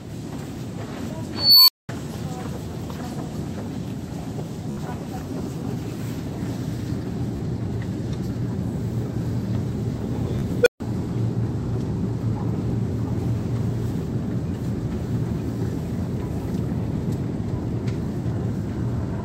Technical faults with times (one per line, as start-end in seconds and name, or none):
1.35-1.89 unstable filter
4.71-4.77 Bluetooth stutter
7.37-7.40 Bluetooth stutter
10.39-10.42 Bluetooth stutter
10.61-10.80 unstable filter